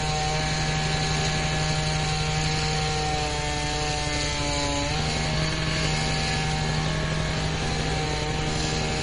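From start to finish, nothing is present above 10.5 kHz, and the remaining content has a watery, swirling quality, with metallic chirps on bright or noisy parts and softened attacks. This is likely MP3 compression at a low bitrate, with damage that fits roughly 40 kbps. The encoder has cut the treble and drops weak frequency components that flicker between frames. Those shifting artefacts set it apart from a simple low-pass filter, which would dull the top without any swirl.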